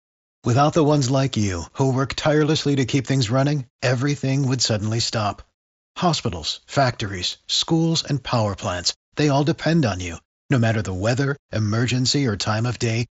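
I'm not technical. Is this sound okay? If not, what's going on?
No. There are dropped samples at 7.32 and 10.09 seconds, each heard as a single sharp click. At each spot, a handful of the tiny measurements that make up the recording went missing, a gap far shorter than a thousandth of a second, so no sound is lost. The sound wave suddenly jumps from one level to a later one, and that abrupt step is the click. A brief hiccup in how the audio was passed along is the likely cause.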